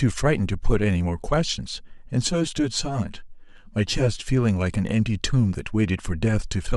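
From 2.27 to 4.28 s, channel delay (comb filtering): one channel lags about 10 ms, so the mono sum sounds hollow, with evenly spaced spectrogram notches from roughly 50 Hz.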